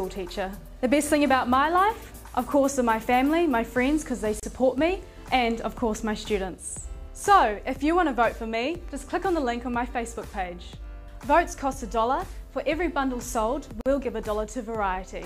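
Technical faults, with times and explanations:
4.40–4.43 s and 13.81–13.86 s, gap at a join of encoded pieces: The sound drops out twice, for about 32 ms and then 48 ms, and resumes exactly where it left off. The edges of each gap are smeared by the codec. The audio was likely encoded in separate pieces and joined untrimmed. The encoder's start-up silence and the padding on each piece's last frame were left in, and they land as short holes in otherwise continuous sound.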